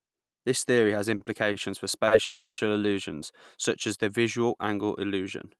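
Just after "theory has", a short stall from a late packet comes at 1.17 s, then at 1.24 s and 1.52 s, with a fourth at 2.07 s. Each time a packet arrived late, the jitter buffer ran dry, and the receiver stretched the last sound for about 30, 20, 30 and 40 ms before resuming where it stopped. Nothing is lost, but each sound is held slightly too long with a faint buzz or dip. On a spectrogram these show as brief horizontal smears of frozen harmonics. The waveform shows a short repeated cycle pattern at each point.

From 2.25 to 2.60 s there is a call audio freeze, likely caused by packets held up in transit that emptied the buffer. The last sound is extended as a fading buzz for about 330 ms in total, and the final 110 ms of that falls to silence before the audio resumes intact. A spectrogram shows a decaying band of static harmonics ending in a blank gap. The waveform tapers to a flat line. 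The whole clip sits above the call codec, which is audible as content stopping near 12 kHz, consistent with Opus at about 32 kbps.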